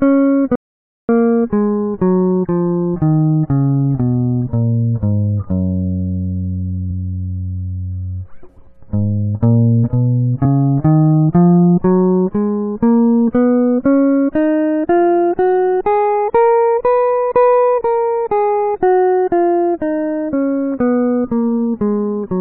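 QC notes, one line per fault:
0.56–1.09 s, audio dropout to silence: The music cuts out abruptly for 0.53 s. The gap is silent with no room tone. The input was likely lost while recording continued writing silence, so that passage of music is gone.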